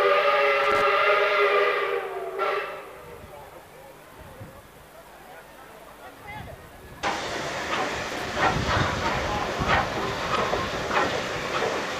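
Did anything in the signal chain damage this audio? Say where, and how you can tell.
Yes, the damage is in the analogue wiring. There are two short bursts of loose connector crackle, one from 0.64 to 0.82 s and another from 8.10 to 8.34 s. Each is an irregular scratchy rattle that lasts a couple of tenths of a second and then stops. That's what you get from a worn or dirty contact shifting in its socket. The signal keeps cutting in and out very fast, and any DC on the line turns each break into a little pop.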